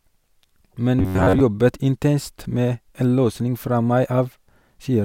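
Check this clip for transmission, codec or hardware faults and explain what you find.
One fault is present: robotic sound from repeated short buffers, from 0.99 to 1.41 s, ending just before "intenst med en løsning". For those 0.4 s the speech becomes a rigid, metallic buzz pitched near 93.8 Hz that only loosely tracks the words. The likely cause is audio arriving too seldom, with the playback side looping the last fragment of roughly 11 ms to fill the gap, so most of the real audio in that span is skipped.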